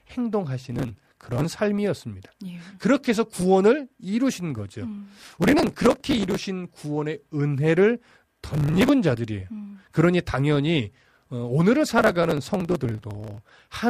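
Processor overload crackle: the processor repeatedly misses deadlines on tiny buffers of under a millisecond. Each missed buffer is skipped, so the speech breaks into gritty, tearing crackle from 0.70 to 1.45 s, 5.19 to 6.39 s, 8.54 to 8.89 s and 11.99 to 13.62 s.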